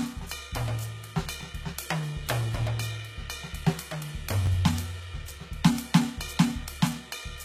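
Across the whole music clip the treble sounds synthetic and gritty, with nothing above 14.9 kHz. The likely cause is HE-AAC compression at a bitrate around 20 kbps. On a spectrogram, the upper bands look like smeared copies of lower ones with misaligned harmonics.

From 1.41 to 1.43 s, and again from 4.46 to 4.48 s, chunks play out of order. A roughly 12 ms block arrives one chunk late, causing a brief jumbled stutter. The waveform shows hard discontinuities at each join.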